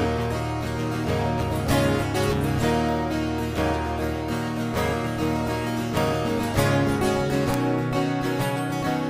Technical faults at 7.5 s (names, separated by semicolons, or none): bit error spike